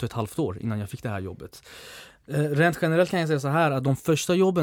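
Nothing in the recording stood out as a technical fault on listening.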